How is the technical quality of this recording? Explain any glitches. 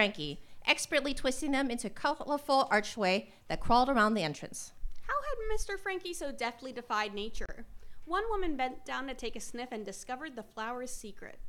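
There's one glitch worth pointing out: a Bluetooth stall from 7.46 to 7.49 s. The sound cuts to dead silence for about 32 ms, then picks up again. The likely cause is a wireless dropout, where interference held up packets long enough that the receiving end's buffer ran empty, so playback simply paused until the resent data got through. You hear it as a brief hole, abrupt on both edges.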